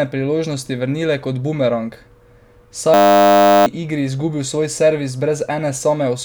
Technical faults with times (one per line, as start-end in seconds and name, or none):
2.94-3.66 system hang loop